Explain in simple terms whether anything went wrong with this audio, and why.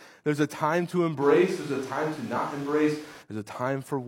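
Two things went wrong. From 1.23 to 3.21 s, right after "there's a time to", there was likely a switch to a distant microphone, with the close microphone's signal lost. The voice turns roomy and hollow, with less bass and more background noise, though about as loud.

At 2.33 to 2.37 s there is damaged data in a compressed stream: part of the file was corrupted, so the playback software misread that stretch and lost its place. It comes out as a brief chirp or blip in the middle of the speech.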